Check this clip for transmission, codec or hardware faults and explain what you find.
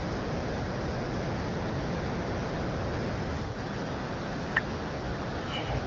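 Nothing stood out on listening to this speech clip.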